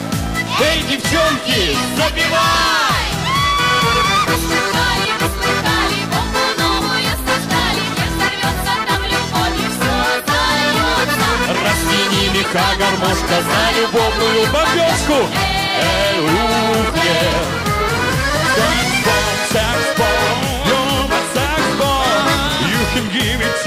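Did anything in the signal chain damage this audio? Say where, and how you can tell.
No, nothing in the signal chain damaged this audio that I can hear.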